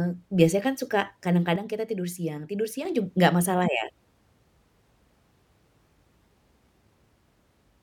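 At 1.56 s, right after "biasanya kan suka", the speech and the background noise drop together by about 6 dB in a single step, with no fade, and stay at that lower level until 2.85 s, where they snap back up just before "jug nggak masalah ya". This sudden gain jump most likely comes from a digital gain setting applied instantly from one sample to the next rather than ramped in smoothly.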